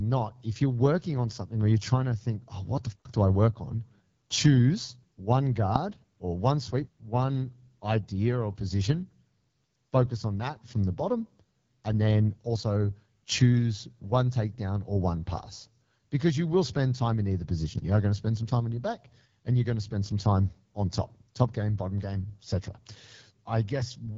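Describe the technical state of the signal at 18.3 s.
At 18.3 s the speech carries the AMR wideband (HD Voice) codec, present throughout. Content stops at 7.6 kHz. The pulse-driven model can't hold detail at this low rate, so the speech sounds rough and raspy, which fits roughly 8.85 kbit/s.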